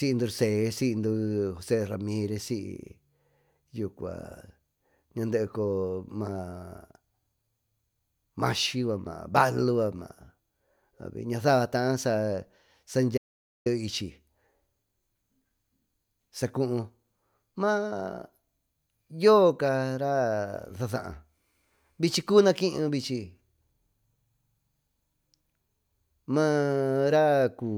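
An audio dropout to silence runs from 13.18 to 13.66 s, taking out roughly 0.48 s of the speech. The input signal was likely interrupted, perhaps by a momentary disconnect or mute, while recording continued and filled the gap with silence. The speech stops abruptly mid-flow and resumes just as suddenly, and the gap between is dead silence with no room tone or background noise, so whatever was said in that half second is lost.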